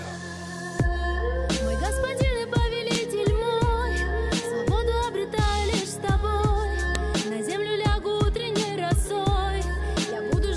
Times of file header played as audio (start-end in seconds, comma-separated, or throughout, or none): 2.95, 6.95